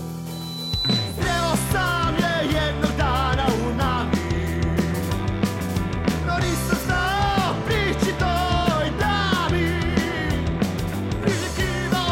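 From 0.32 s to 1.35 s there is loudspeaker feedback squeal, a pure tone at 4 kHz that swells over about half a second and then sits roughly 5 dB above the rest of the sound. A microphone was hearing the speaker it fed, and at 4 kHz the loop gain went above one, so that frequency fed on itself. On a spectrogram it shows as a single bright horizontal line at 4 kHz, and the waveform envelope bulges as it grows.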